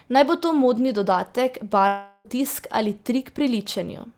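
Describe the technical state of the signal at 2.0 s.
Long network dropout, 1.87 to 2.27 s: audio likely stopped arriving, so the last sound continues as a fading buzz, and 0.38 s is lost.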